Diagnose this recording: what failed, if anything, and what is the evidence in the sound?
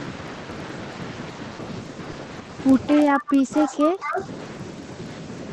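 A filter restarted on every block at the buffer stage puts a steady 21.5 Hz tick under the speech, which fits a 2048-sample block. It shows as evenly spaced vertical lines on a spectrogram.

Short concealed packet loss on the network occurs at 2.11–2.15 s: 20 ms is missing and synthesised over, which leaves a brief smear and a smoothed, repeated-looking waveform patch.

Echo leak, likely from an echo canceller in call processing, sends back a faint copy 228 ms late at 2.88–3.34 s (about 15 dB down) and 3.54–4.25 s (about 10 dB down). It shows as delayed, duplicated spectral traces.

Speech suppressed in double talk, likely by the same echo canceller, produces dips of up to around 20 dB between 2.93 and 4.21 s, roughly a second in total. They appear as chopped envelope gaps.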